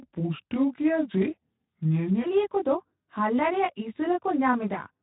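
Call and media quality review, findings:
Section at the wrong speed, 0.00–2.24 s: likely a clock mismatch in the playback or edit stage, running audio at 0.77x. Speed and pitch fall together, roughly four semitones. Speech deep and dragging, then jumps to normal rate.

Channel delay (comb filtering), throughout: one channel lags the other by around 20 ms before the mono sum. Shared content cancels at evenly spaced frequencies, first notch near 30 Hz. Sound rough and slightly doubled across the whole clip.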